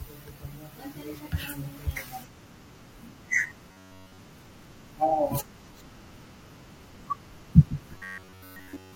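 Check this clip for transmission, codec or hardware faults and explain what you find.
One transmission fault appears twice. Robotic sound from repeated short buffers, at 3.71–4.22 s and 7.95–8.96 s, turns the speech into a rigid metallic buzz at 93.8 Hz. This is likely one roughly 10.7 ms chunk looping while new audio fails to arrive. The spectrogram shows evenly spaced flat harmonic lines, and the waveform repeats one identical cycle.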